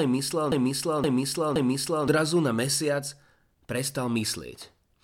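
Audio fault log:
0.00–2.08 s, broken-record loop: the clip opens with a 0.52 s fragment of speech already repeating, cycling back to back three times before the sound moves on into "na mesiac". Each pass is an exact copy, so the audio that belonged there is lost. The likely cause is a stalled player or stream resending the last fragment it held. On a spectrogram, identical blocks tile at 0.52 s intervals; the waveform shows matching envelopes joined by abrupt seams.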